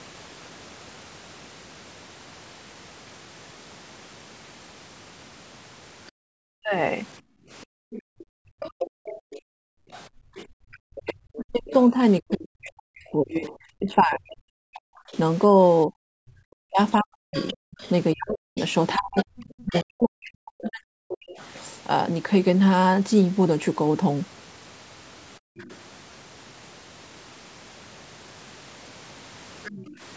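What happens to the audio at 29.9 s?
From 29.64 to 29.87 s a faint second voice sits well below the main speech, likely the other side's voice leaking through past the echo canceller. Right after, from 29.87 to 30.0 s, the background gated by the echo canceller dips by about 17 dB for roughly 150 ms as it clamps the mic, then recovers.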